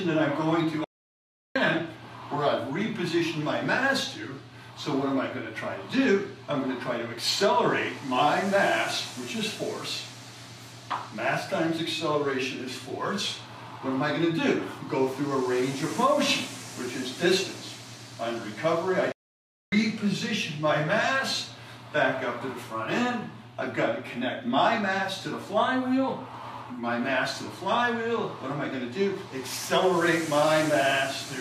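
A playback stall silences the sound from 0.84 to 1.56 s and from 19.12 to 19.72 s, likely from the player running out of data. These gaps are far longer than a brief dropout.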